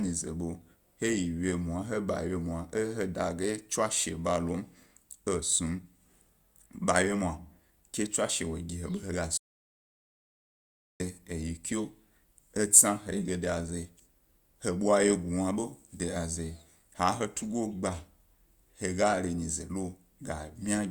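At 9.38 s the speech cuts to an audio dropout to silence until 11.00 s, 1.62 s of silence with no room tone, likely from a lost input.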